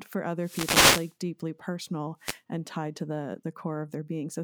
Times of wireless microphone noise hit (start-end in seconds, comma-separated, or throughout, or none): 0.39-1.15, 2.19-2.40